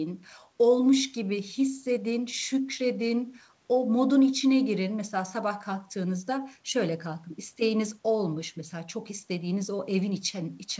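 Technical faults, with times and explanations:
Nothing faulty is audible anywhere in this speech recording.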